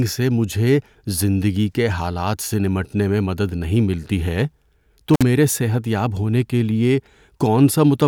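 At 5.14 s the speech breaks up in an intermittent contact fault lasting until about 5.22 s: a loose plug or cable connection opens briefly, so the signal drops out for about 50 ms, with crackle at the edges where the contact scrapes open and shut. Faint hiss fills the open gap. The crackle at the edges sets it apart from a clean digital dropout, whose gap starts and stops abruptly without that scratchy contact noise.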